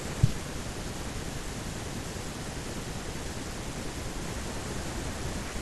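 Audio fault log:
No fault can be heard anywhere in the speech. Nothing here calls for an entry in this log.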